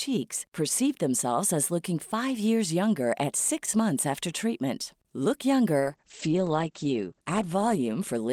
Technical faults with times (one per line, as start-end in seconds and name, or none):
5.80-8.33 call bitrate drop